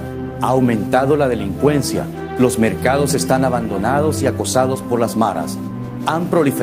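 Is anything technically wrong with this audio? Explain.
Yes. Two related timing faults run through the clip.

Clock drift between sender and receiver affects the whole clip. The sender's clock runs about 4 percent fast compared with the receiver's. Audio therefore arrives a little quicker than it is played out. The jitter buffer keeps filling up. It never settles at a steady level. To the ear, the timing feels slightly rushed and unsteady from start to finish, with small, irregular hiccups rather than one clean break.

Repeated timing corrections run from 0.31 s to the end at 6.63 s. The receiver keeps dropping short pieces of audio to catch up with the faster sender. Every edit goes the same way, removing sound, never repeating it. The net effect is playback at 104 percent speed. The cuts are small and unevenly spaced. They are heard as faint skips and a tempo that lurches slightly forward rather than flowing evenly.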